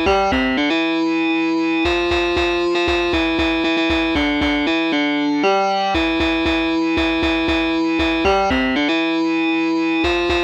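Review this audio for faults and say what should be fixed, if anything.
Nothing to fix: no audible faults.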